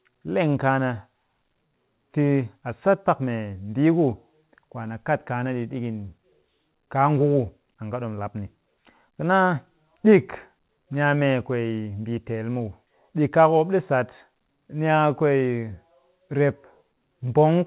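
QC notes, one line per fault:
No faults are heard in this speech clip. It has come through a WebRTC call path using G.711 A-law at 64 kbps, which leaves nothing above 4 kHz and gives it the narrow telephone band.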